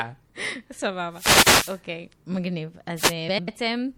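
Throughout the speech, the encoder appears to be starved of bits, so the likely cause is MP3 compression at a rate consistent with about 64 kbps. It cuts the treble and lets weak frequency lines switch on and off, which gives plainly audible watery swirl, metallic chirps on s sounds and smeared attacks.

From 1.11 to 1.82 s, and again from 2.96 to 3.14 s, the radio link of an analogue wireless microphone fades as reflections cancel, so receiver noise rises over the signal. Each wireless microphone noise hit comes through as a burst of static swish.

From 3.28 to 3.48 s, two adjacent runs of audio, each about 96 ms long, were decoded in swapped order. The result of these frames out of order is a brief garbled flutter, though no time is lost.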